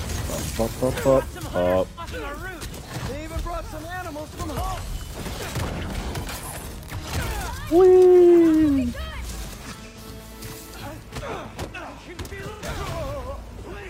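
AAC frame loss with concealment: lost frames were patched from the last good spectrum, leaving short smeared, phasey patches at 1.88–2.00 s, 6.03–6.08 s, 9.86–9.97 s and 12.51–12.62 s, each fitting one or two missing frames.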